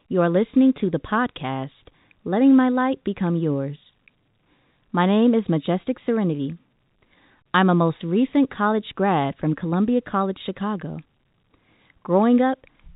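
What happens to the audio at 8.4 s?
Nothing goes wrong at 8.4 s: the speech continues intact through that moment, carried over the band-limited G.711 telephone channel with no break or added damage.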